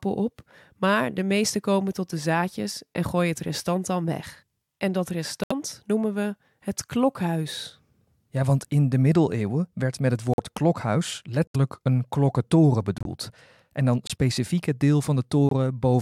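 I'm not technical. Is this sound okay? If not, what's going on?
No. Some chunks of the compressed speech data got damaged, the player couldn't decode them, and it put in silence instead. These corrupt frame muted faults sound like sudden short holes at 5.44, 10.34 (after "middeleeuwen werd met het"), 11.48 (before "een klokkentoren"), 12.98, 14.07 and 15.49 s (after "het deel").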